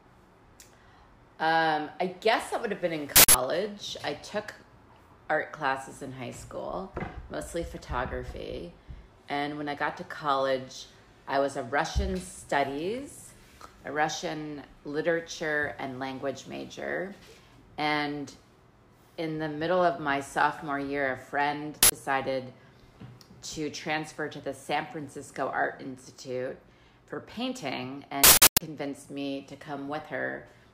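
At 3.16 s there's a harsh blast of digital noise lasting about 0.19 s, then a shorter one at 21.83 s (about 0.09 s) and the longest at 28.24 s, running about 0.37 s. Each is an uninitialised buffer: a block went out before any audio was written into it, so whatever garbage sat in memory got played as samples. The lengths fit blocks of 8192, 4096 and 16384 samples.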